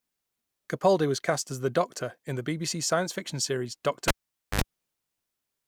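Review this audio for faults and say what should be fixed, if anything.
At 4.08 s the speech cuts out with a pop, the signature of a cable pulled and plugged in while the line was live. The signal then drops to near silence for about 0.48 s while the connector is out, followed by a 67 ms burst of 50 Hz mains buzz as only the plug tip makes contact. A second pop marks full reconnection at 4.61 s. Prevent this by muting or powering down the channel before moving any cable.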